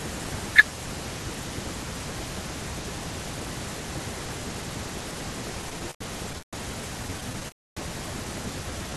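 Repeated stalls (stutter) break up the speech from 5.61 to 6.55 s and again from 7.03 to 7.46 s. Packets reached the receiver late or more slowly than they were played, so its jitter buffer kept running dry and the last sound was stretched to cover each wait. The first span has six gaps, the longest 147 ms, filling about a third of that stretch. The second has nine short gaps of no more than 14 ms, about a fifth of its length. Nothing is lost, but the speech drags and stumbles.

A call audio freeze follows at 7.48 to 7.79 s. The sound halts and about 280 ms of near-silence is inserted before the speech resumes exactly where it stopped. The likely cause is packets held up in transit, emptying the jitter buffer. The receiver bridged the wait and then let its delay grow by the same 285 ms, so nothing is missing, only pushed later.

A jitter buffer slow-down runs from 8.63 s to the end at 8.96 s. 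Having just built up extra delay, the receiver refilled its reserve by repeating single pitch periods and fragments of pauses, adding 72 ms. That section plays at about 81% of normal speed with unchanged pitch, so sounds are drawn out. Throughout, the Opus call path limits the audio's bandwidth to about 12 kHz.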